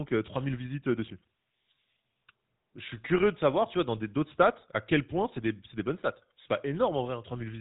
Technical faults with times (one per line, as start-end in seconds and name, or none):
0.00-7.61 GSM full-rate codec